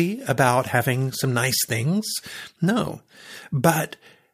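No technical faults can be heard anywhere in the recording; the signal stays continuous and steady throughout.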